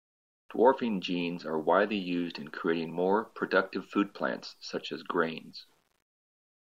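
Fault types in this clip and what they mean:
Low bit depth without dither: a grainy, rasping distortion runs through the whole speech clip, most audible on quiet syllables and decaying word endings. It sits roughly 40 dB below the signal and tracks it closely, which fits a signal likely truncated to about 10 bits with no dither. Unlike steady dither hiss, this grit follows the signal and changes character with the sound, so it is quantisation error, not added noise.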